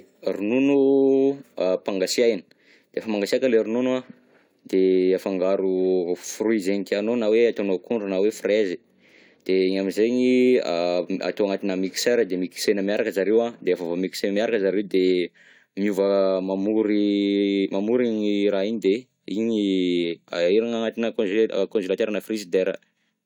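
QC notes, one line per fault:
No faults found in the speech. Nothing in the clip calls for a QC note.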